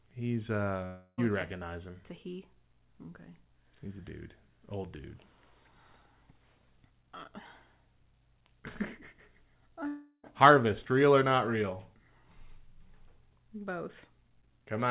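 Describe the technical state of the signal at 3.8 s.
At 3.8 s the audio is intact, with no dropout, glitch or distortion, only the narrowband sound of the call path, which carries nothing above 4 kHz.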